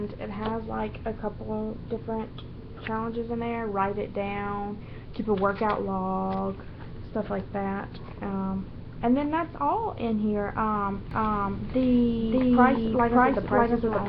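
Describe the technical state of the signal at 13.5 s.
At 13.5 s the signal carries a doubled audio track, present from 11.11 s through to the end of the clip. A second full-band copy of the same material runs about half a second behind the original at roughly equal level, with no decay or room colouring, and it starts abruptly. The likely cause is the signal being picked up a second time through a slower path, so both versions are mixed together out of step.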